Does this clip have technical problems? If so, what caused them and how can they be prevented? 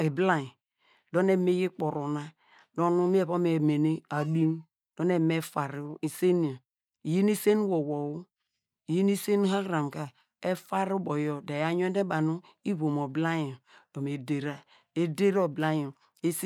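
No technical faults are audible.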